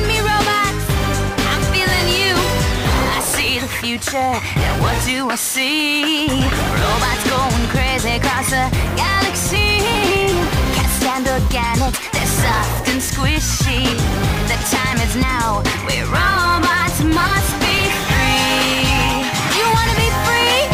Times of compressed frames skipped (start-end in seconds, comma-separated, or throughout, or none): 9.55, 11.93, 13.91, 15.22